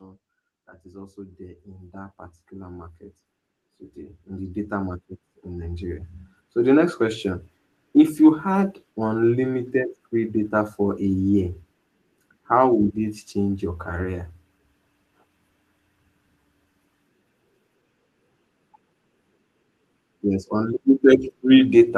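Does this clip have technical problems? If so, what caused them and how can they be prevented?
Yes. The speech shows automatic gain rising twice. From 0.82 to 3.03 s the level climbs by about 8 dB. From 3.94 to 7.28 s it climbs by about 10 dB. Voice and background noise swell together each time. The gain control judged the input too quiet and slowly turned it up. The top end stops near 12 kHz, as expected on a call path. To prevent this, set a proper microphone level and disable or limit automatic gain control.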